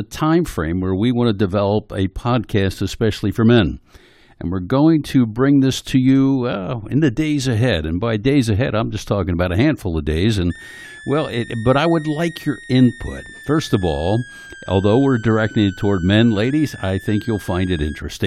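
A switching supply whistle runs from 10.5 s to 18.0 s, starting just after "a handful of days". A power supply running in audible burst mode adds a thin tone near 1.5 kHz, wandering up to about 1.9 kHz, roughly 20 dB below the speech.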